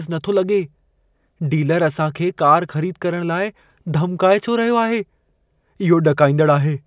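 No technical faults can be heard anywhere in this speech recording. There is nothing to place on the timeline.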